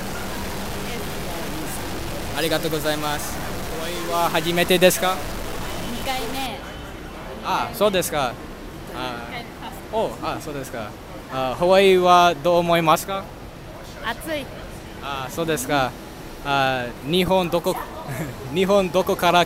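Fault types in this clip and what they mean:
stuck bit: From the start to about 6.46 s the audio carries a harsh, buzzy distortion that follows the waveform, and the quiet stretches fill with noise rather than falling silent. The likely cause is one data bit held at a fixed value, so roughly half the samples jump by a step near -25 dBFS. Plain clipping would only flatten peaks, but here the error also lands on small values around zero, which is why even the pauses turn noisy.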